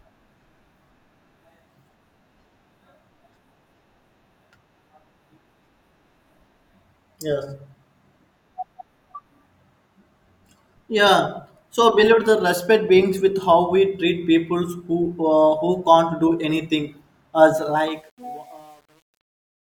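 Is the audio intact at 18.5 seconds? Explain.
No. Truncation distortion on a fade runs from 17.57 to 19.76 s, worst from 17.95 s: undithered low-bit rounding, consistent with about 9 bits, makes the fading speech gritty.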